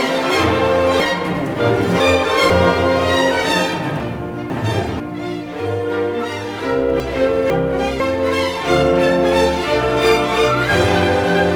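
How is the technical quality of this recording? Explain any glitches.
The recording has three chunks-out-of-order glitches, at 1.0–2.5 s, 4.0–5.0 s and 7.0–8.0 s. In each, a 0.5 s block plays late: after two following blocks in the first case, after one in the others. The result is a jumbled passage with hard joins.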